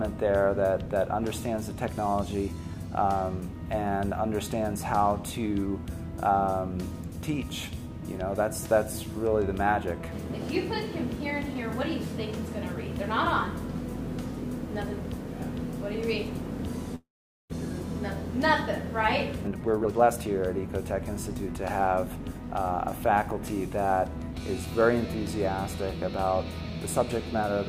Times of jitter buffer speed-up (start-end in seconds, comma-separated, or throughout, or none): 19.41-20.09, 21.81-22.71